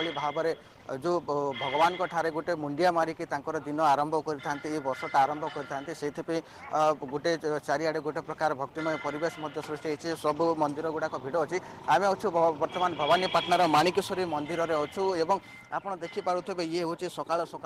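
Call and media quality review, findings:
No faults found on review; nothing to log against the clip.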